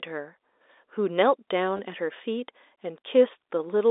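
Packet loss with the last packet repeated occurs from 1.77 to 1.79 s in this telephone-band speech recording, which carries G.711 mu-law coding over a 300 Hz to 3.7 kHz line. About 20 ms of audio went missing, which fits two lost 10 ms packets. The receiver filled the gap by replaying the last good packet. The repeated audio produces a brief robotic stutter.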